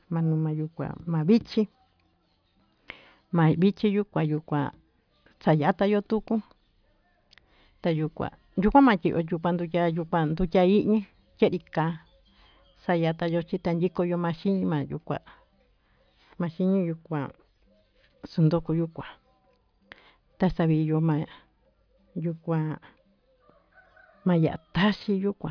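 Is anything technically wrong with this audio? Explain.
No, nothing technically wrong.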